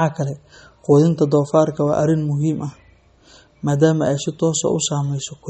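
Likely MP3 compression throughout the speech: starved of bits, the encoder drops everything above 12.9 kHz and weak detail, leaving plainly audible damage that suggests about 32 kbps.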